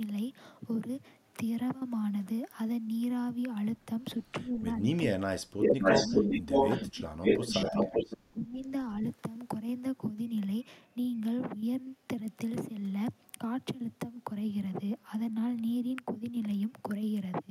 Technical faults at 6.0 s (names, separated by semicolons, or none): echo leak; speech suppressed in double talk